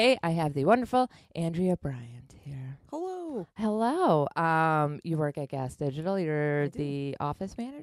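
No technical faults can be heard anywhere in this speech recording. Nothing in the signal stands out as a problem at any point.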